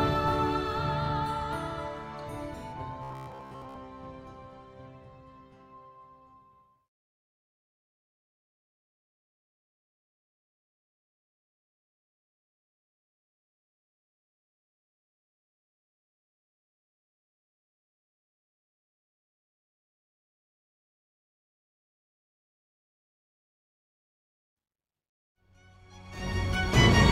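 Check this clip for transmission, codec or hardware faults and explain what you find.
One fault stands out: robotic sound from repeated short buffers between 3.03 and 3.75 s. The likely cause is audio arriving too rarely, so playback keeps reusing a roughly 15 ms fragment while fresh material is skipped. That happens for most of the stretch, imposing a fixed 66.7 Hz buzz that turns the sound rigid and metallic while its broad shape still carries through. Simple dropouts would leave gaps or clicks. Here there's a steady, pitched drone.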